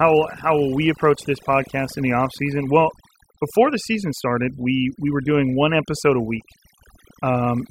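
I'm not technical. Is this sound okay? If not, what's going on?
No. All the way through this speech clip, the gaps between phrases drop to an unnatural near-silence dotted with twinkling, chirpy specks. That is overdone noise removal: a clean-up tool was set too strong, so it silenced narrow slices of sound it judged to be background noise, and it took the quieter parts of the voice away along with the noise.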